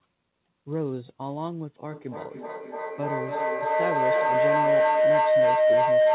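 From 1.91 s to the end, a tone of roughly 700 Hz rises out of the speech and keeps swelling, with the loop repeating about every 0.3 s, until it stands about 11 dB above the speech. This is feedback howl: two devices in one room share the call, so each trip from microphone to loudspeaker and back returns louder, and the repeats narrow onto the loop's favoured frequency. The call path's 4 kHz ceiling is audible throughout.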